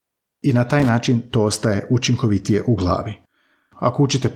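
At 0.80 s a loose connector crackle breaks into the speech. It lasts until about 0.89 s, roughly 90 ms. A worn or dirty contact is making and breaking. That chops the signal into an irregular, scratchy burst. The Opus voice compression underneath leaves only light, fullband coding traces.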